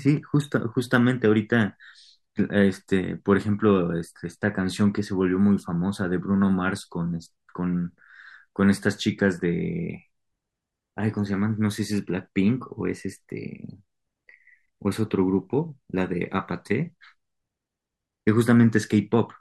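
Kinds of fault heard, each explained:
Nothing stood out on listening to this speech recording.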